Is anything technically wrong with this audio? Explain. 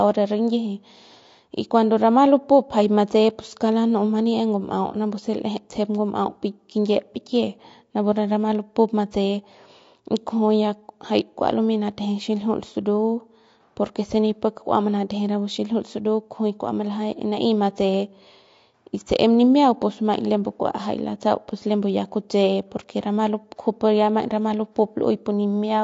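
Yes, the speech carries plainly audible codec damage throughout. It is likely low-delay AAC compression of the AAC-ELD kind, with a roughness that fits a bitrate around 32 kbps. Its short frames smear pitch harmonics, so voiced sounds turn grainy. A spectrogram would show noise filling the gaps between harmonic lines and a thinned, patchy top band.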